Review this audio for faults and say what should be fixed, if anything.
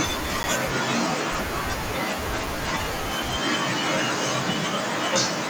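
A block of digital silence at 0.43 s: about 10 ms of samples dropped to zero, a flat waveform gap bounded by vertical broadband click lines. Prevent it by giving the audio callback enough buffer headroom so output is always filled on time.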